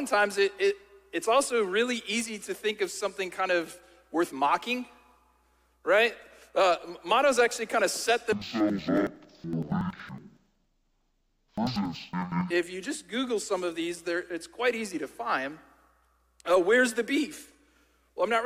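From 8.33 to 12.54 s, interleaved audio is read as planar. Each block's first half goes to the left channel and its second half to the right. Both play at half speed. The sound drops an octave, doubles and chops 10.8 times a second, which fits a 4096-sample block.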